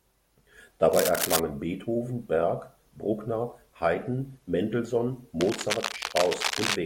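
From 0.92 to 1.40 s, a burst of cable scratch noise sits over the speech. It is dense and uneven, a scratching rustle about as loud as the voice itself. It likely comes from a worn cable or connector being moved, so the contact resistance jumps about rapidly. The same crackle returns from 5.41 to 6.76 s. This time it runs longer and sits a little below the speech.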